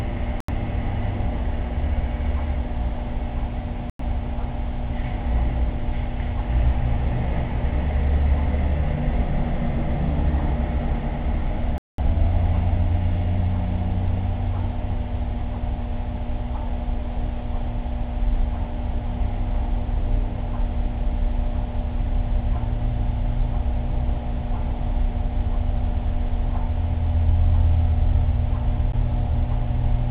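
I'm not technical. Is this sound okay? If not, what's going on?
No. The sound briefly drops to silence four times, at 0.40, 3.90, 11.78 and 28.92 seconds, then carries on where it stopped. These gaps last from a hundredth to a fifth of a second. This is likely a Bluetooth stall, where wireless interference delays the audio and playback pauses until it catches up.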